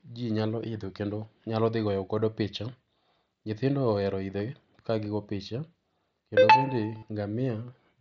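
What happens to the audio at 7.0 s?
From 6.98 to 7.03 s, just after "kendo bende", concealed Bluetooth headset packet loss fills a 45 ms gap by repeating recent waveform, giving a brief buzzy tone and slight warble on recovery.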